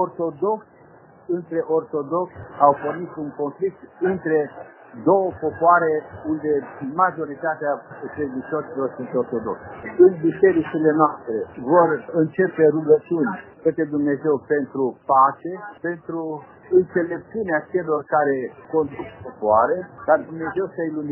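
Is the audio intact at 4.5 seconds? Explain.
Yes, the audio is intact at 4.5 seconds, with no dropout, click, distortion or other fault at that point.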